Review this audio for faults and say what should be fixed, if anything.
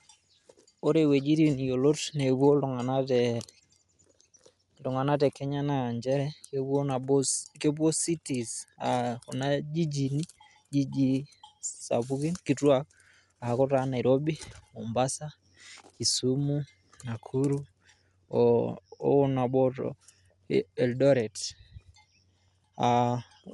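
Throughout, the speech is dull, cut off above 11.4 kHz, with rough fluttering noise. This is likely Dolby Digital compression, fitting a 64 kbps bitrate. Encode at a higher bitrate to prevent it.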